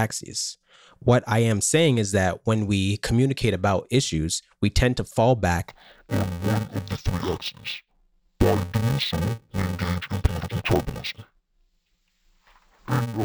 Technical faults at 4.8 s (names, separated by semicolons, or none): none